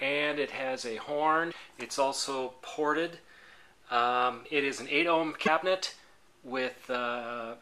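At 1.50 to 1.54 s and again at 5.45 to 5.48 s the audio jumps forward with a brief garbled glitch, each about one 26 ms MP3 frame long. The likely cause is a broken MP3 bit reservoir: after lost frames, the next frame borrows data that is no longer there.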